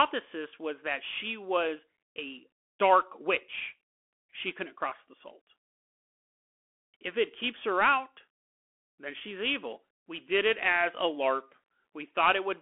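Throughout the speech, a Bluetooth CVSD headset codec narrows everything to a phone band of roughly 250 Hz to 3.4 kHz, with nothing above 3.8 kHz, which fits a 64 kbps link. One-bit step coding lags on loud high sounds. S sounds turn scratchy over a granular hiss.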